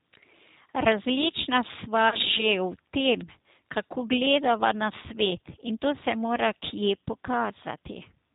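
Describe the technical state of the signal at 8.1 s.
At 8.1 s, as throughout, G.729 codec damage is plainly audible: speech rebuilt from pitch and pulse models sounds rough and synthetic, not merely dulled like a 4 kHz low-pass.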